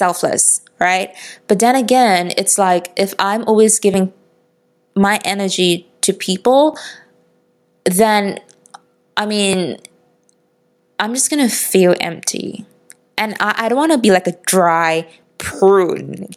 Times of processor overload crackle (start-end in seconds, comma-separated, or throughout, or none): none